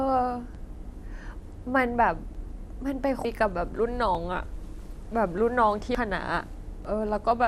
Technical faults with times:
0.00-7.48 MP2 compression
0.55 audio missing between chunks
1.45 audio missing between chunks
2.35 audio missing between chunks
3.25 audio missing between chunks
4.15 audio missing between chunks
5.95 audio missing between chunks
6.85 audio missing between chunks

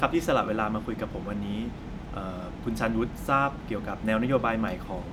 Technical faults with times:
none

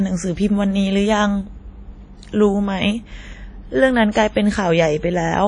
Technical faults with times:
0.00-5.47 WMA compression

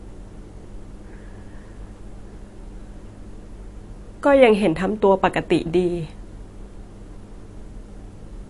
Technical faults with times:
0.00-8.49 MP3 compression

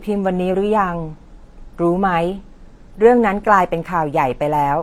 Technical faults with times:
0.00-4.82 transcoding between lossy codecs

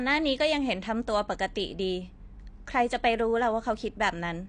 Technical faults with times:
0.00-4.49 AAC compression

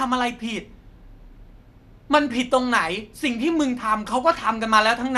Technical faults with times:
0.00-5.18 MP2 compression

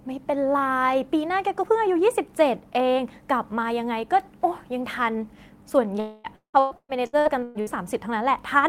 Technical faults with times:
6.00-6.27 long network dropout
6.36-7.70 repeated packet loss (robotic sound)

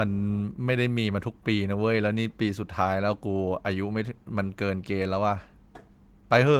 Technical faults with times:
none

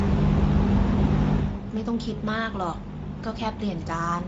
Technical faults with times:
0.00-4.27 Speex codec

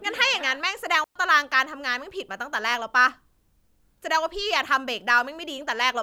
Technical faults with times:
1.04-1.15 digital wireless dropout

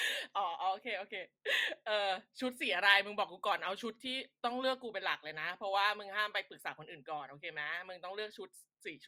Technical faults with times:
none

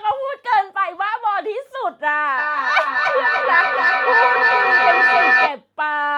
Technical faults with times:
2.38-5.61 feedback howl

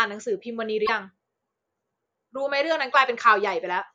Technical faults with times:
0.82-0.89 damaged data in a compressed stream

